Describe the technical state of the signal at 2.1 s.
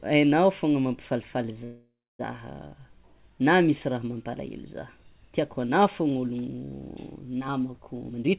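At 2.1 s the sound sits inside a call audio freeze, 1.64 to 2.21 s, just after "aignao fôgna mampifalifaly". Packets were likely held up and the jitter buffer ran dry. The last sound is stretched into a fading buzz, then near-silence. Speech resumes intact, about 0.55 s late.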